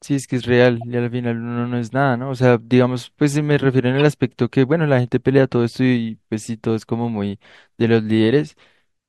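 Speech, with two runs of corrupt frames decoded: a short glitch at 0.81 s and a louder one from 3.99 to 4.01 s, peaking around -25 and -15 dBFS. Damaged compressed frames played anyway put energy at wrong frequencies, apparently across a few frames each.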